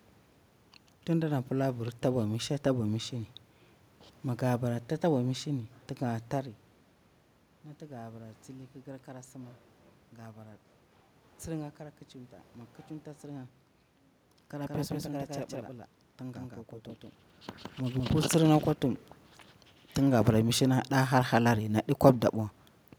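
From 14.67 s to 18.13 s, the speech is doubled. A second, full-band copy trails by roughly 150 ms, at about the same level. It has no room colour, and it cuts in and out abruptly, starting just before "tsirnga kwa tuhum". This doubled audio track likely comes from a slower second capture path.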